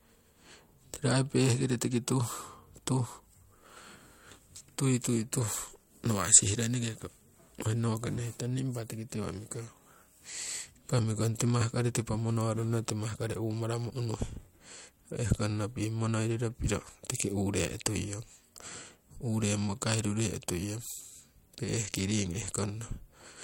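No technical faults can be heard.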